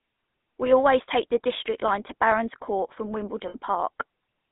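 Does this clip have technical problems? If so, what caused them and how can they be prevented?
Yes. Throughout, the speech carries the gravelly, buzzy roughness of the GSM full-rate codec. It models the vocal tract and excites it with sparse regular pulses, which fits a 13 kbps stream. The audio is confined to roughly 200 Hz to 3.6 kHz, and the damage is plainly audible. Prevention: carry the call over a wideband codec such as AMR-WB or EVS instead of legacy full-rate GSM.

From 3.48 to 3.56 s, lost GSM frames leave a brief rough, metallic ring. The decoder repeats the last good frame's parameters to cover about 60 ms of missing audio, which fits three 20 ms frames. Prevention: improve radio coverage or add stronger channel protection so fewer frames arrive corrupted.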